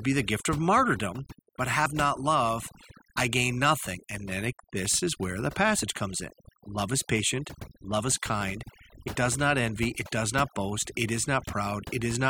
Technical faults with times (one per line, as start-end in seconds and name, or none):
0.00-12.29 overdone noise removal
1.85 damaged data in a compressed stream
5.82 damaged data in a compressed stream
9.07 damaged data in a compressed stream